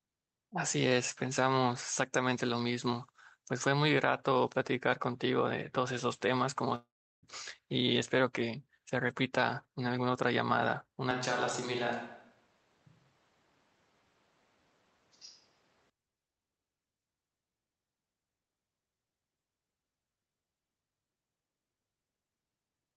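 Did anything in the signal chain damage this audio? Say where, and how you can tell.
Yes. At the network stage there is likely a long network dropout from 6.75 to 7.25 s. About 0.48 s of audio is missing. The last sound is stretched into a fading buzz or hiss, then roughly 0.37 s of near silence follows. Playback resumes without the lost part.

At the capture stage, from 11.11 to 15.90 s, the speech turns hollow and roomy. It drops about 5 dB and loses bass. Room noise sits about 35 dB below the speech. Both transitions are abrupt. This is likely a switch to a distant microphone.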